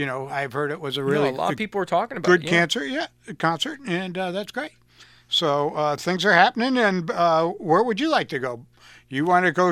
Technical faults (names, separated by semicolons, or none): none